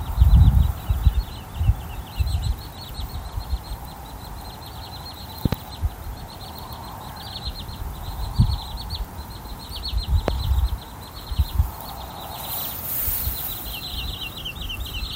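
The audio has two loud pops sitting on top of it, each jumping around 20 dB above the surrounding level: a quick double pop from 5.46 to 5.55 s, then a single one from 10.28 to 10.31 s. The sound carries on underneath both. Likely cause: a voltage spike from a plug, switch, static or driver glitch.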